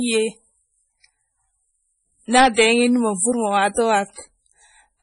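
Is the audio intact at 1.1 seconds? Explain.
No. At 1.1 seconds the speech carries MP3 compression artefacts, and they run through the whole clip rather than just this moment. Nothing is heard above about 10.6 kHz, so the top of the sound is cut off flat. The damage is heavy. The encoder likely ran short of bits, which fits a very low bitrate around 24 kbps. With too few bits, quiet frequency detail drops in and out between frames. That gives the speech a watery, swirling quality and blurs its consonant onsets.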